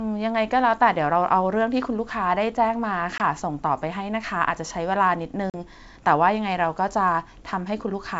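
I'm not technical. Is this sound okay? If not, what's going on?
No, there's packet loss on an ADPCM call here. The speech drops out abruptly around 3.18 to 3.21 s (about one packet) and again around 5.50 to 5.55 s (about two). The decoder briefly loses track, so the speech comes back slightly distorted before settling.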